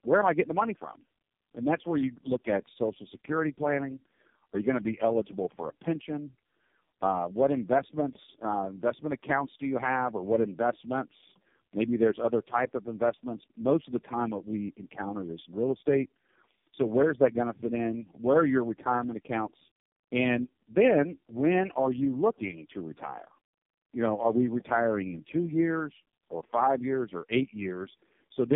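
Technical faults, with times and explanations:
Throughout, tandem speech coding: three speech codecs in series, each re-encoding the last one's decoded output, so the speech sounds rougher and more warbly than one codec would, and nothing above 3.6 kHz.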